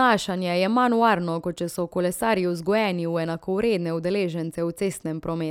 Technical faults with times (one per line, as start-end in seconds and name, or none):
none